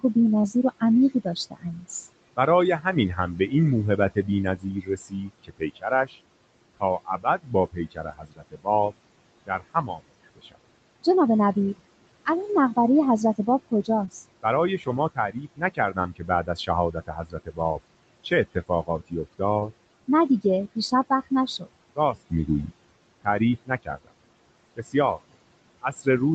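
Noise suppressor artifacts run through the whole speech clip. The suppressor pulls the room noise down by about 21 dB between phrases. Then it lets the noise back up under each phrase. So the background pumps in and out. The room noise sits about 18 dB under the speech.

Speech cut by the noise suppressor starts at once, from 0.0 to 6.18 s. About one and a half seconds of speech in that span is dragged down with the noise, by up to about 20 dB. Soft consonants and word endings go faint.

Short concealed packet loss hits at 0.41 to 0.45 s. About 20 ms of audio never arrived. The receiver stretched the previous sound across the gap and blended back. It comes out as a brief smear or wobble.

More speech cuts follow. From 6.77 to 8.92 s about one second is swallowed, by up to about 21 dB. From 9.46 to 11.07 s about half a second goes, also by up to about 21 dB. From 13.38 to 17.6 s about one second is lost, by up to about 19 dB.

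A second concealed packet loss falls at 14.05 to 14.09 s. Another 20 ms is filled in, giving a brief wobble.

From 18.24 to 19.41 s about 0.2 s of speech dips, by up to about 17 dB.

A third concealed loss lands at 19.59 to 19.63 s. It is again 20 ms, heard as a short smear.

The last speech cuts follow. From 20.08 to 22.71 s about 0.2 s is turned down, by up to about 18 dB. From 23.24 to 24.11 s about 0.15 s drops, by up to about 20 dB. From 24.77 s to the end, quiet endings sink by up to about 21 dB. The Opus call path at 32 kbps keeps nothing above 8 kHz.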